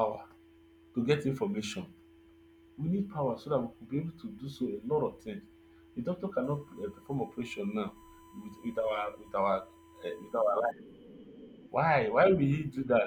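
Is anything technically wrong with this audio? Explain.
Yes. From 6.44 to 10.71 s a steady, fixed-pitch whine at 1 kHz sits under the speech, roughly 30 dB below it. This is USB whine: the bus pulls current in 1 ms frames, and that pulsing leaks into the audio through the power or ground path.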